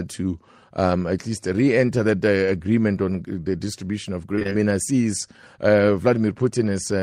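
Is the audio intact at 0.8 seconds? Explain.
Yes, at 0.8 seconds the audio is intact, with no dropout, click, distortion or other fault at that moment.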